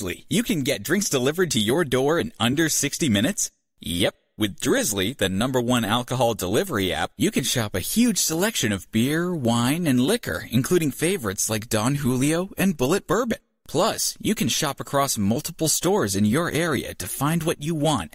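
Nothing technical stands out in this speech recording; there's no fault to point to anywhere along it.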